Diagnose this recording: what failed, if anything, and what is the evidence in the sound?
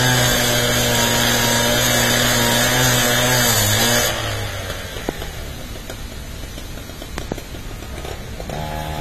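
Throughout, the sound is dull and smeared, with fizzy, warbling texture on sustained parts and nothing above 14 kHz. This points to the codec stage, likely AAC compression at a low rate, fitting about 32 kbps. Band-limiting plus spectral smearing distinguishes it from simple low-pass filtering.

A loud pop from 5.09 to 5.11 s and a double pop from 7.18 to 7.34 s jump about 15 dB above the sound, which continues underneath. These are sharp transients, not gaps or repeats, so they are likely voltage spikes in the analogue wiring rather than buffer dropouts.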